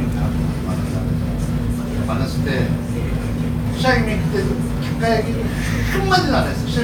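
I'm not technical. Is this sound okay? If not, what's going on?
Yes, nothing wrong can be heard here and the recording needs no fixing.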